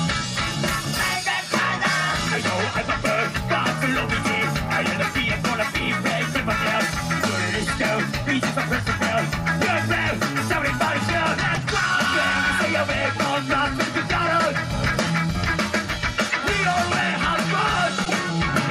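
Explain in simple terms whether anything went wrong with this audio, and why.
Three short glitches stand out, and each is a corrupt frame decoded. A small chunk of the compressed data got damaged, and the player decoded it anyway, so for that instant sound lands at the wrong pitches. You hear it as a quick chirp or blip at 11.56 to 11.58 s and at 16.30 s, each spanning a couple of frames, and a single damaged frame at 18.03 to 18.11 s. The 16.30 s one is quite faint; the last is the loudest.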